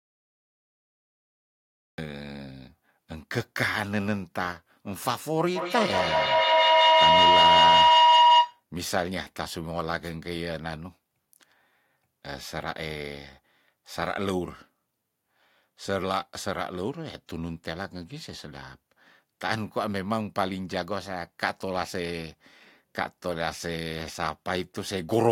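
The first 1.98 s are digital silence, and the speech then enters mid-sound with no attack, a cut-off start from recording beginning late. On a waveform it's a dead flat line that jumps straight to full amplitude; the spectrogram shows a hard vertical edge.

From 5.56 to 8.64 s a feedback howl builds as a second device's loudspeaker and microphone form a loop that gains on each pass. Repeats swell, coming round about every 200 ms, and narrow to a tone around 1 kHz, peaking about 11 dB above the speech. A spectrogram shows a bright horizontal band there.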